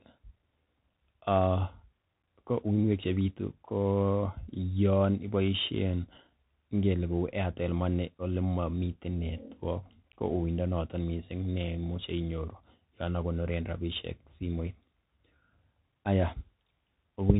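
Bluetooth CVSD headset codec damage runs throughout the speech. Each sample is coded as a single up-or-down step of adapting size, which fits a 64 kbps stream, so nothing above 3.8 kHz survives, s sounds turn scratchy, and a granular hiss sits under everything.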